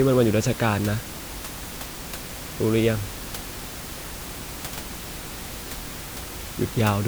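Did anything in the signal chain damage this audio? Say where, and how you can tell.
No, nothing in the signal chain damaged this audio.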